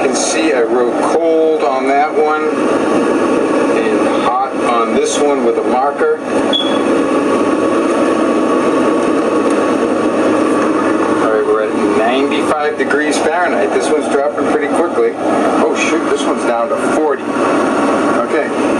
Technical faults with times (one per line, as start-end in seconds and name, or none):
0.00-18.79 gain pumping